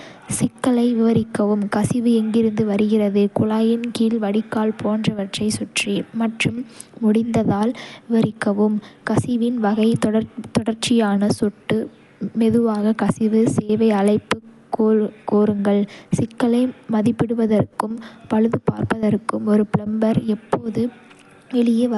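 Likely Dolby Digital compression, at a rate fitting 64 kbps, removes everything above 11.4 kHz throughout, so the speech sounds dull, with rough, fluttering noise.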